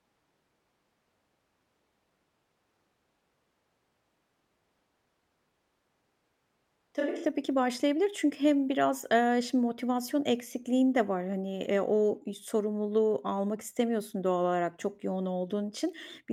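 Speech, with a switch to a distant microphone at the start. From the opening to 7.25 s, the sound is roomy and hollow, with thin bass. Background noise sits about 30 dB below the speech. The level barely changes, so the shift is one of tone and space rather than loudness. At 7.25 s the sound snaps back to a close, full pickup. The close microphone's signal was likely missing for that stretch, leaving a farther microphone to carry the recording.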